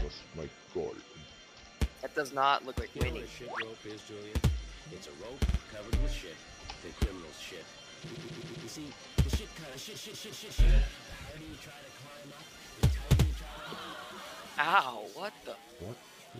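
The audio has two stutters from repeated frames. At 5.48 s, a 52.2 ms slice plays twice more, adding 0.10 s. From 8.14 to 8.66 s, a 130.6 ms slice loops four extra times, adding 0.52 s. The cause is compressed frames written more than once, so the decoder replays them. The block lengths fit frames of about 26 ms.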